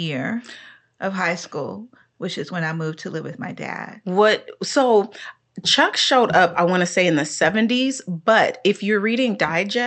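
Nothing in this speech recording stood out as a technical problem on listening, with the audio carried over the call link as expected.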